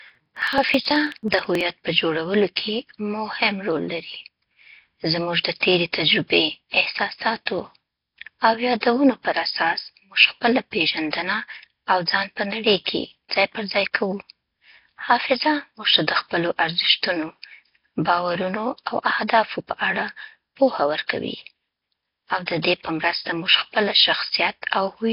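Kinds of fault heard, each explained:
Nellymoser compression: The speech sounds rough, hissy and underwater throughout, with nothing above 5.3 kHz. This heavy damage likely comes from Flash's coarse low-bitrate codec.
Periodic USB or driver dropouts: From 0.10 to 1.61 s, before "په جوړولو کې مهم", roughly 10 ms is skipped every 54 ms. About thirty regular ticks result.
Pre-echo: Attacks at 7.46, 8.80 and 22.46 s carry hiss smeared 14, 24 and 17 ms ahead of them. Block-wide codec noise fills the quiet before each attack.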